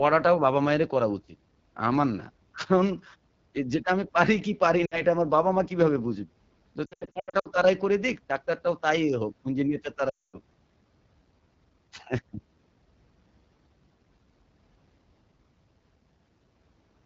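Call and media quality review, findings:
AMR wideband (HD Voice) codec, full length: constant rough, raspy speech texture. The low-bitrate AMR-WB mode models the voice coarsely, and the band above 6.4 kHz is filled with shaped noise. The degradation fits 8.85 kbit/s, the second-lowest rate.

Lost AMR speech frames at 4.85–5.02 s, 6.85–7.48 s and 10.10–10.39 s. Frames failing their radio checksum are concealed by replaying the last pitch and vocal tract settings at falling gain. At 4.85 s, about 60 ms dips to near silence. At 6.85 s, gaps scattered over 0.6 s (longest 80 ms) cause repeated dips and warbles. At 10.10 s, 240 ms of lost frames drop to near silence within two frames, and resumes rough.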